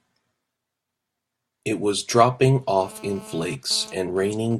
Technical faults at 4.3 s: GSM phone buzz

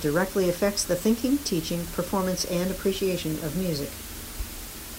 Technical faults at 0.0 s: low bit depth with dither

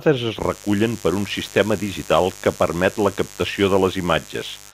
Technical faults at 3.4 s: mains buzz

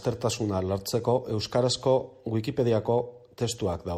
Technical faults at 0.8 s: none

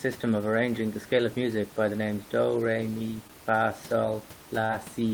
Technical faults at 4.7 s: short concealed packet loss

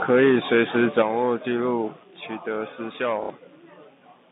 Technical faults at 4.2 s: none

